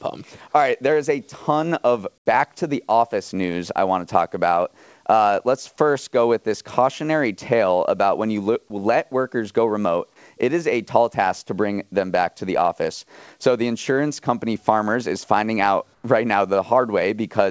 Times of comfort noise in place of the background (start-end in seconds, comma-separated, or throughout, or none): 2.18-2.26, 15.94-16.04